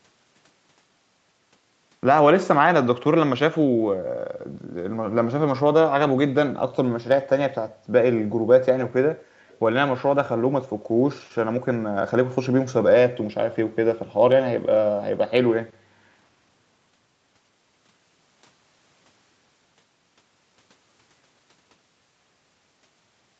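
A steady buzz at 46.9 Hz runs through the whole clip while the speech keeps its normal speed. This is a block size mismatch (truncated), with block ends dropped at a rate that fits 1024-sample blocks. From 9.48 to 9.59 s a very faint delayed copy of the speech follows 178 ms behind, far quieter than the voice. This is likely an echo leak, where the echo canceller let loudspeaker sound through.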